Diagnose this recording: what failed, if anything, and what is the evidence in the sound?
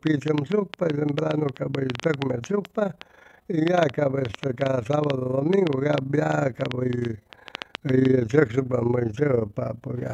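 A frame-based processing stage, in call processing or the codec, rebuilt the speech from windowed frames whose overlap does not sum to constant gain. The result is overlap-add ripple throughout: the level pulses by about 11 dB at around 30 Hz, a rough robotic flutter.

A train of clicks runs from 0.07 to 8.06 s, around fifty pulses of similar shape at about 6.3 per second, unevenly spaced and peaking some 15 dB above the speech. This is likely interference in the analogue wiring or a struggling interface.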